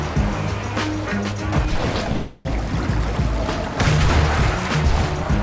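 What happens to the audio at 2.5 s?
At 2.5 s the sound resumes after a call audio freeze from 2.12 to 2.48 s, likely a jitter-buffer underrun; a fading tail fills about a third of a second, unlike a dropout, nothing is lost.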